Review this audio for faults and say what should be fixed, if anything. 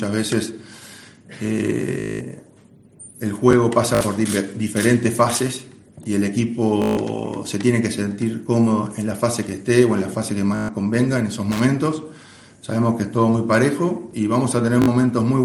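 Bluetooth stutter occurs five times: 2.00–2.21 s, 3.95–4.01 s, 6.82–6.97 s, 10.56–10.69 s and 14.82–14.88 s. Each time the link drops or delays data, the receiver replays its last short slice, producing a buzzing, machine-gun repeat. The sound then resumes later in the material, skipping roughly 205, 56, 149, 131 and 56 ms. On a waveform this appears as identical repeating blocks, and a spectrogram shows regularly spaced vertical striations. Prevent it by shortening the distance to the receiver, reducing radio interference or using a wired path.

Loose connector crackle sounds as a brief, irregular burst of scratching from 11.52 to 11.60 s. A worn or dirty contact is rapidly making and breaking, chopping the signal, and the pops come from any DC on the line jumping as the circuit closes. A waveform shows ragged gaps and sharp spikes, and on a spectrogram they appear as broadband vertical streaks scattered unevenly across those 80 ms. 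Clean or replace the connector and secure the cable so it cannot move.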